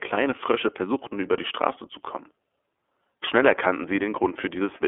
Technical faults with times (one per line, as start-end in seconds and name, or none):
0.00-4.88 iLBC codec